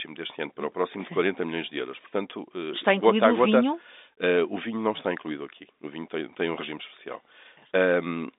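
No faults are present; the speech carries ordinary G.711 telephone coding, with the line band running from 250 Hz to 3.7 kHz and nothing heard above 3.8 kHz.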